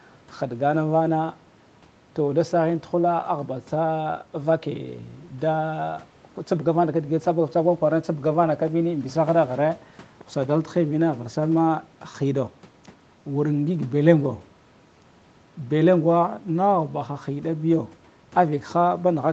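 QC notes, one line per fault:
No faults found in this speech clip; the call microphone processing and the call codec leave it band-limited with nothing above about 8 kHz, which is expected for this path.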